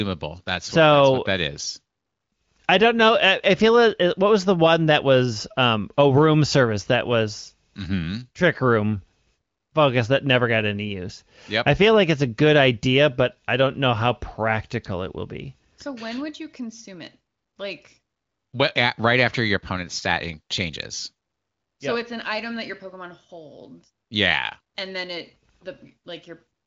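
No faults heard; the speech carries the band limit of AMR wideband (HD Voice) coding, with nothing above 7.5 kHz, and any coding damage is faint at most, which fits a high-rate mode near 23 kbit/s.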